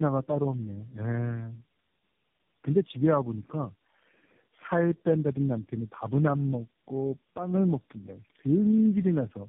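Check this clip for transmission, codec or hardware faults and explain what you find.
The clip has one fault, tandem speech coding, present from start to finish. The speech is band-limited with nothing above 3.7 kHz, and it sounds rough, muffled and warbly throughout. That points to about four low-rate speech codecs in series, ending in AMR-NB, with the call decoded and re-encoded at each link border. Every coder models the previous one's distorted output rather than clean speech, so the errors compound into rough, noisy speech that is worse than any single codec would produce.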